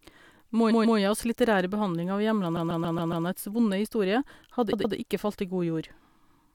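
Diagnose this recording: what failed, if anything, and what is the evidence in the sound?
Repeated frames at the codec or storage stage: identical 139 ms blocks replay at 0.70–0.98 s and 2.56–3.25 s, a 116 ms block at 4.72–4.95 s, adding time rather than leaving dropout gaps.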